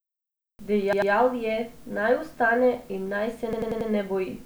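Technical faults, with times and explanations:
0.93 to 1.12 s, repeated buffer. The same 93 ms slice of speech plays three times in a row. Fresh audio arrived late, so the device replayed its last buffer. Each replay joins hard to the previous one, giving a short stutter. The length fits a 4096-sample buffer.
3.53 to 3.90 s, repeated buffer. The same 93 ms piece plays five times running, a longer stutter. Each join is abrupt. Nothing seems skipped; the speech resumes where it stopped.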